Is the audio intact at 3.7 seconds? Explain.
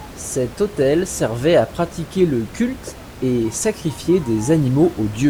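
Yes, the audio is intact at 3.7 seconds; the only thing heard alongside the speech there is the room's own background noise, sitting about 18 dB below it, which belongs to the recording rather than being a fault.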